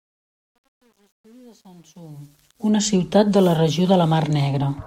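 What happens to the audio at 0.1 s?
At 0.1 s the speech sits inside truncation distortion on a fade, running from 0.0 to 2.92 s and worst until about 2.11 s. The fade-in was computed without dither at a coarse word length, which suggests around 10 bits. The quietest part of the ramp collapses into a few square steps, so it sounds gritty. Unlike a clean fade, the grit grows as the level falls.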